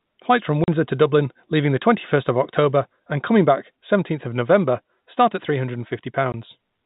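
Packet loss filled with silence: at 0.64 to 0.68 s, a 40 ms gap consistent with two 20 ms packets, and at 6.32 s a single packet's worth, each a hard-edged dropout.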